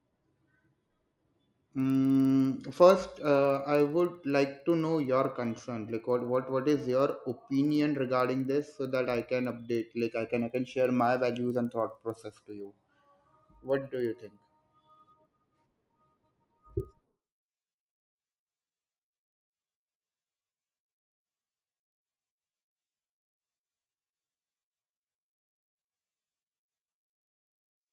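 Throughout the speech, a resampler restarted on every block: each 50 ms block was converted separately, likely from 24 kHz to 48 kHz, without its neighbours' samples, so every edge carries a small error. This is heard as a steady 20 Hz ticking buzz riding on the speech.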